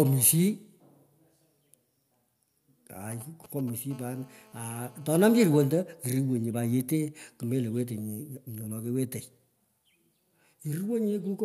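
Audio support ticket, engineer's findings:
GSM signalling bursts, 3.12–3.70 s: 2G handset nearby sending short radio burst groups before a call or text, rectified by the audio input stage. Galloping dit-dit-dit ticks and brief 217 Hz buzzes, roughly 20 dB under the speech.

GSM phone buzz, 3.91–5.25 s: same handset now in a call, transmitting continuously at 217 bursts per second and rectified in the analogue path. Steady, raspy 217 Hz buzz with many harmonics, about 29 dB below the speech.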